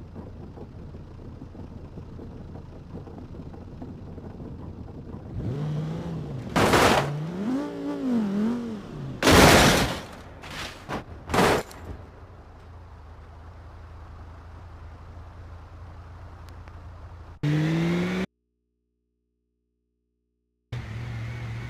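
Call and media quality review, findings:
Loud pop, 16.49–16.70 s. Likely static discharge or plug/switch transient injecting a voltage step; downstream stages shape it. Result: two sharp pops peaking about 5 dB above programme level, sound continuing underneath.

Audio dropout to a faint residue, 18.25–20.72 s, 2.47 s lost. Signal source cut, likely input connection break, with the following path still live. Abrupt loss of programme; gap holds mains hum about 50 dB below normal level, then sound returns mid-flow.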